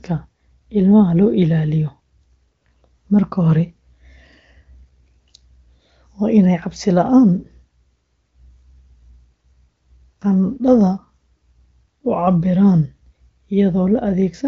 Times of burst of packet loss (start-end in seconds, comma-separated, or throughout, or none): none